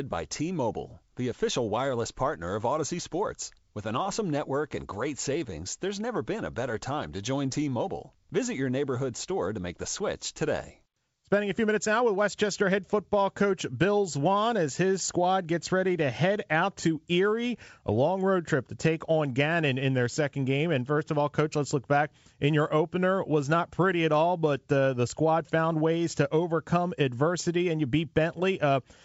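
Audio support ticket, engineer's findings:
Nothing stood out on listening to this speech over the G.722 wideband telephone coding path at 64 kbit/s, where any effect of the coding is faint at most.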